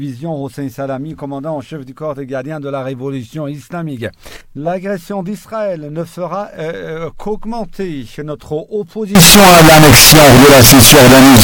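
From 9.15 s to the end at 11.43 s, the sound turns into a loud, harsh, nearly square wave at an almost fixed, high level, with background noise as prominent as the main sound. The likely cause is float read as integer, with 32-bit float samples being interpreted as 32-bit integers.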